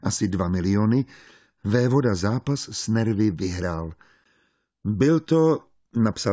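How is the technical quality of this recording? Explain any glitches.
Listening through, nothing in the recording stood out as a technical problem.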